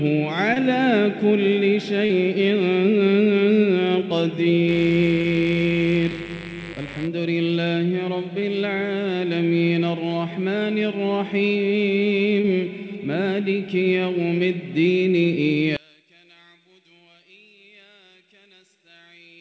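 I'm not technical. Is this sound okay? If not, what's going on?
No, there are three separate problems.

First, short concealed packet loss. Five times, tiny pieces of the sound didn't arrive in time over the call connection: at about 0.54 s, 2.06 to 2.11 s, 5.21 s, 8.39 s and 12.41 s. Each gap was about 20 ms, and the one at 2.06 s was about 40 ms. The receiving end covered each hole by stretching out the sound that came just before it, so you hear a quick smear or little wobble rather than silence.

Second, mains buzz from 4.66 s to 7.09 s. That's the electrical supply leaking in at 50 Hz. It isn't a smooth hum. It's a raspy buzz, because a dimmer, power adapter or poorly shielded cable lets in sharp spikes that stack up into many overtones. It sits under the sound for those couple of seconds.

Third, from 15.77 s to the end, the sound suddenly drops to almost nothing. That fits one channel inverted: one side of the stereo pair is likely flipped upside down, so when the two sides are combined, everything they share cancels out. 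What's left is only the faint leftover difference between them, which makes the ending nearly disappear.

The audio also went through a call connection using the G.722 codec, which keeps nothing above 8 kHz. That limits how crisp it can sound, but that part is normal for a call.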